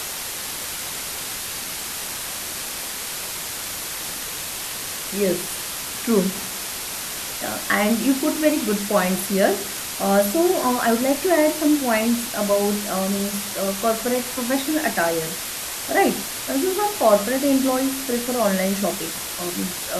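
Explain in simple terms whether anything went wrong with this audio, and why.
Yes, something went wrong. A loud, steady hiss runs through the whole clip, from start to finish. It sits almost level with the speech itself. This is low bit depth with dither. The sound was stored with very few steps of loudness, which fits only about 4 bits. A little random noise was added before rounding. That turns the rounding error into a smooth, even hiss instead of harsh, crackly distortion.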